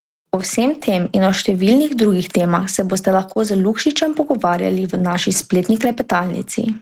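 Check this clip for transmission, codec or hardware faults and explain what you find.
The clip shows four related timing faults, and the sender's clock runs slow against the receiver's.

Clock drift between sender and receiver runs through the whole clip. The sender's clock is about 2 percent slow, so the jitter buffer keeps draining and the receiver has to keep stretching the audio to avoid running dry. The result is a faintly uneven pace in the speech.

Repeated timing corrections run from 0.70 to 6.18 s. To compensate for the slow sender, the receiver plays at 99 percent speed by inserting small repeated pieces, about 50 ms in total. Each insertion is tiny, heard only as slight hiccups or a gently dragging tempo.

A short stall from a late packet occurs at 3.33 to 3.38 s. One packet arrived late and the buffer emptied, so the receiver held the last sound for 21 ms until the packet came in. 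Nothing is lost, but one sound lingers briefly with a slight buzz or dip.

Scattered short gaps occur between 4.56 and 5.88 s. About four late packets were each patched by extending the preceding sound, roughly 30 ms altogether, with the longest patch near 10 ms. These register as brief ticks or small smears in the speech.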